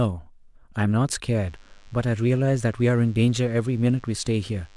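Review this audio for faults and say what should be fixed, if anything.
A DECT cordless phone buzz runs from 1.36 s to the end of the speech, around 35 dB below it. A nearby handset or base pulses its radio every 10 ms, and the audio circuit rectifies those bursts into a thin 100 Hz buzz. On a spectrogram it shows as evenly spaced horizontal lines at 100 Hz and its harmonics. The waveform shows small regular spikes every 10 ms. To prevent it, keep DECT equipment away from the microphone, cables and preamp, and use shielded balanced cabling.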